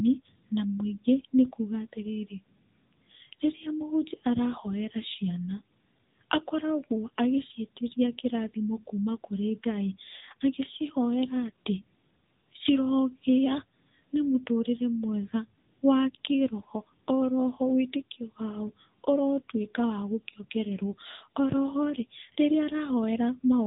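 The whole way through, this speech has the AMR narrowband mobile codec sound: nothing above 3.8 kHz, and a buzzy, synthetic edge that fits a low mode around 8 kbit/s.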